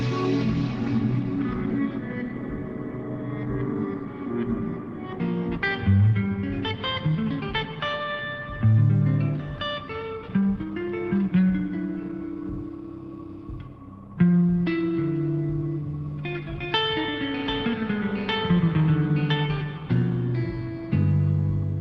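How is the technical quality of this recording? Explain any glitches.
Technical quality is sound, with no glitches or faults anywhere in the recording.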